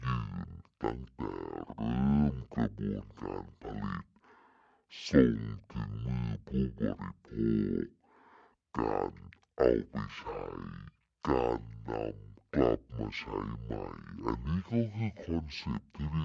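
From start to finish, the speech plays at half speed and a full octave low, 12 semitones down. This is a wrong sample rate fault. It fits 44.1 kHz audio played at about 22 kHz without conversion. Voices sound deep, slow and dragged.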